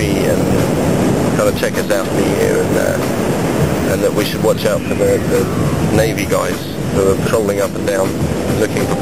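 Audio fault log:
throughout: sample clock jitter. The converter's clock wanders by something on the order of a microsecond or two rms, so each sample is taken a little early or late at random. The timing error turns into an amplitude error that scales with how steeply the waveform is moving, leaving a noise-like roughness about 40 dB below the signal that tracks loud and high-frequency content and disappears when the sound stops.
2.01–2.03 s and 7.26–7.28 s: damaged data in a compressed stream. At each point, a stretch of the encoded stream about 20 ms long is corrupt, so the decoder cannot read those frames properly and has to resynchronise on the next valid frame header. The result is a brief disruption in the decoded audio, an abrupt artefact rather than a gradual change in the sound.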